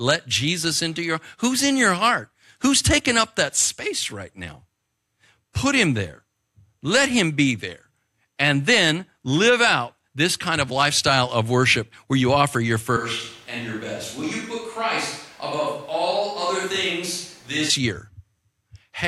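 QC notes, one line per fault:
12.97–17.70 s, switch to a distant microphone: after "where you offer your" the speech abruptly turns hollow, roomy, thin, about 5 dB quieter, with room noise near 30 dB down, likely because the close mic failed. Unlike a gain dip, tone and noise change together.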